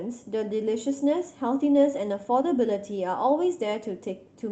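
Nothing here counts as a fault: the speech came through an ordinary call path, with the top end rolling off around 8 kHz in a way that fits an Opus link at a moderate bitrate.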